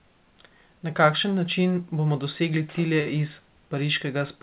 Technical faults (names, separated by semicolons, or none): short stall from a late packet